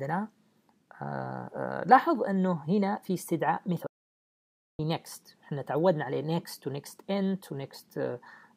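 At 3.87 s the sound cuts off dead and stays gone until 4.79 s, a gap of about 0.92 s. That's an audio dropout to silence: the gap is silent, with no room tone or background hiss underneath, so it isn't a quiet passage. What you'd expect is that the input path was likely interrupted while the recorder kept writing samples, and whatever happened in that stretch simply wasn't captured.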